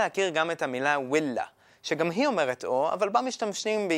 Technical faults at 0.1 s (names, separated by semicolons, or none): none